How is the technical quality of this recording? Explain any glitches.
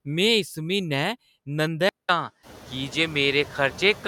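The recording has two problems: processing artifacts throughout and an input change partway in.

The noise suppressor artifacts run through the whole clip. The suppressor pulls down whatever bands it judges to be steady noise by about 15 dB, frame by frame, so the background dips in the gaps and swells under the speech.

From 1.89 s the input switched to a poorer device. You hear a 200 ms dropout, then the band narrows, so the top end goes duller. There's a new noise floor roughly 30 dB under the speech, but the level stays about the same. That's most likely the system swapping microphones.

Around 2.5 s the room noise itself climbs about 23 dB, still sitting about 20 dB below the speech.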